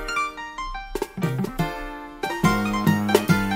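The sound plays at double speed from start to finish. Everything is shifted up 12 semitones, a full octave. This is audio read two samples at a time. The reader treats each pair of samples as one frame, mistaking the layout for two channels or wider samples.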